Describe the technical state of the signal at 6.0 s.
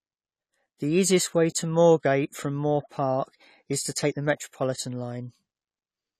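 At 6.0 s the speech carries AAC compression, present across the whole clip. Nothing sounds above 14.1 kHz, and sibilants smear with a swirling, watery texture. This is likely AAC-LC quantising frequency bands coarsely, which fits a bitrate near 32 kbps.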